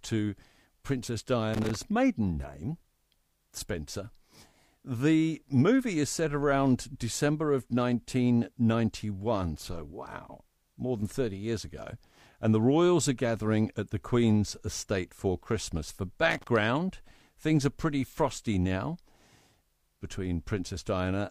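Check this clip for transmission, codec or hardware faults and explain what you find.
The speech has a hardware fault in two places, loose connector crackle, at 1.54 to 1.82 s, just before "maiden name", and again at 16.30 to 16.48 s. A worn or dirty contact somewhere in the cable path is intermittently making and breaking as it shifts, so the signal is chopped on and off in rapid, uneven steps, and each make or break jumps any DC level on the line into a pop. The result is a brief, irregular burst of scratchy crackle over the speech, lasting about a quarter of a second the first time and under a fifth the second.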